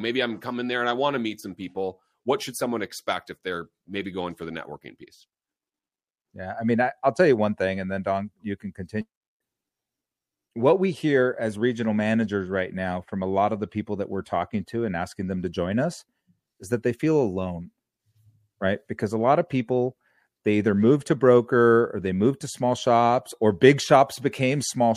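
Nothing technically wrong turns up anywhere in this recording of speech, so there's no fault to point to, no time to flag and no cause to explain.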